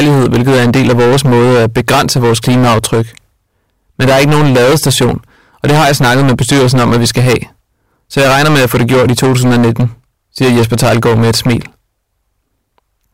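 A harsh, buzzing fuzz sits on every loud syllable from start to finish: hard clipping. The speech is driven about 18 dB past what the stage can pass, so nearly a third of the waveform is sliced flat, spraying high harmonics across the spectrum.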